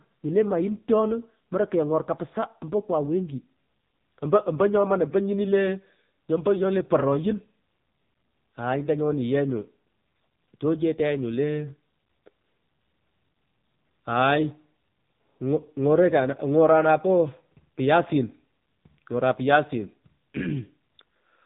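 From start to finish the speech carries the sound of the AMR narrowband mobile codec, heavily degraded. Nothing reaches above about 3.8 kHz, so sibilants and breath lose their edge. The vocal-tract model, driven by sparse pulses in each short 5 ms stretch, makes the voice buzzy and synthetic, which fits a low rate near 6.7 kbps. On a spectrogram, energy stops abruptly at a flat ceiling, and the harmonics look smeared and blocky from frame to frame.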